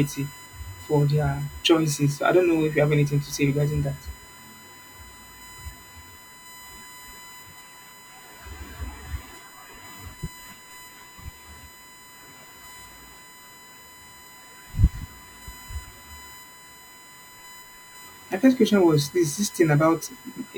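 Throughout the speech runs USB whine, a fixed tone at 1 kHz, loudest at 2 kHz, about 25 dB down; unlike mains hum, it sits at bus-frame rates.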